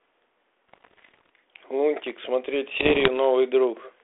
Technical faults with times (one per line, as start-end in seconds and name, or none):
0.69-1.29 bit errors on an ADPCM link
2.00-2.16 loose connector crackle
2.72-3.09 bit errors on an ADPCM link